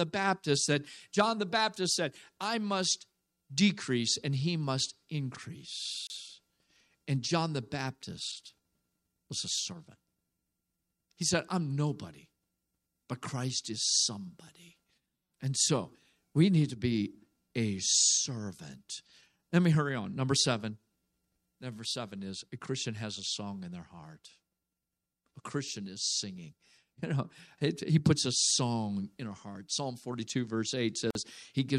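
A speech recording with two short silences where separately encoded pieces were joined, each a gap at a join of encoded pieces: about 31 ms at 6.07 s and about 47 ms at 31.11 s. Each piece kept its encoder start delay and padded final frame, so silence opens, with codec-smeared edges. Unlike a dropout, nothing is lost. The speech resumes exactly where it stopped rather than jumping ahead.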